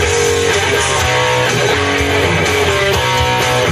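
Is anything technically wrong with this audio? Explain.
No, nothing technically wrong stood out on listening to this audio.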